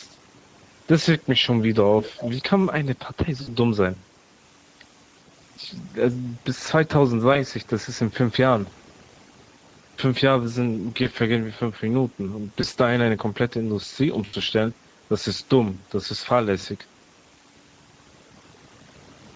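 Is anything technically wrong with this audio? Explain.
Yes. Three faults are audible in this speech.

Overdone noise removal runs throughout. Bands near the noise estimate are pushed far down, leaving near-silent gaps with twinkling specks.

Speex codec damage is plainly audible throughout. Too few bits for the excitation make the voice hoarse and noisy, which fits a Speex bitrate near 16.8 kbps.

VoIP packet loss concealed by the speech codec occurs at 3.41–3.58 s, 7.33–7.41 s, 11.03–11.08 s, 12.61–12.66 s and 14.25–14.35 s. The decoder stretches its last pitch into a fading buzz. The first and last events suggest about 60 ms and 80 ms of missing audio.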